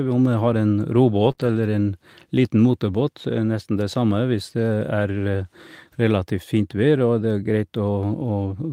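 At 1.31 s and again at 1.35 s, short concealed packet loss: two consecutive chunks of the speech, each about 20 ms, failed to reach the decoder in time. The receiver covered each hole by extending the preceding sound, carrying on its pitch where it was voiced and substituting shaped noise where it was not, before easing back into real audio. The result is a brief smear or wobble running from 1.31 to 1.39 s, and any short consonant inside that stretch can disappear.

From 1.39 to 1.49 s comes a lost packet rebuilt from error correction. Here the losses were recovered rather than guessed: each following packet carried a low-bitrate duplicate of the missing one, and the decoder played those duplicates, so no gap opens. The repaired span runs about 60 ms, which fits three separate 20 ms packets rebuilt. Because the duplicates hold less detail, this section sounds rougher and noisier than the audio around it.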